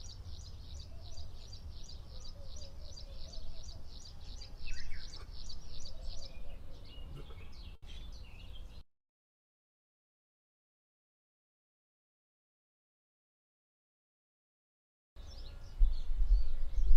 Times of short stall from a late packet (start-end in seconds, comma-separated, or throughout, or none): 7.75-7.87